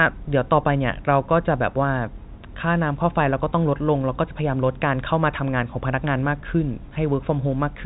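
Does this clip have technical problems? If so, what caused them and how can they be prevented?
No technical faults are audible.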